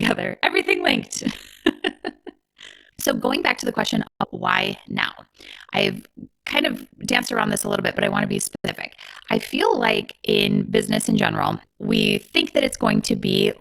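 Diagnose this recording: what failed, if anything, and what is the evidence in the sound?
Overlap-add ripple runs throughout: frames resynthesised with mismatched windows swing the level by about 60 dB near 50 Hz, a steady robotic flutter, unlike random codec warble.

Digital broadcast dropout at 4.07–4.26 s, after "back to the question", and at 8.55–8.69 s, after "I want to be": clean 3 ms fades into silence, consistent with three and two lost frames.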